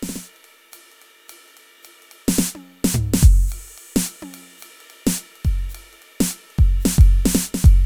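No technical faults can be heard anywhere in this music.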